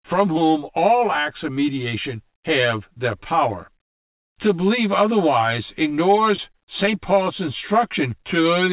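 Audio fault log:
Throughout: channel delay (comb filtering). One channel lags by about 10 ms, and summing to mono cancels at roughly 50 Hz and every 100 Hz above, giving a hollow, phasey tone.
6.36, 6.52 and 6.86 s: short concealed packet loss. About 20 ms of audio went missing each time, and the receiver extended the previous sound to cover the gap, heard as brief smears or wobbles within the narrowband, 4 kHz-limited call audio.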